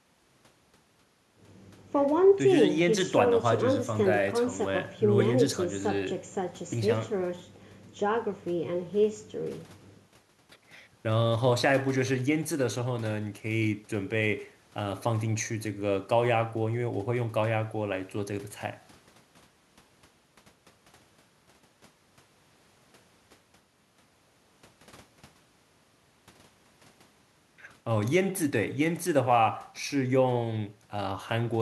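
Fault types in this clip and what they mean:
No technical faults can be heard in this recording.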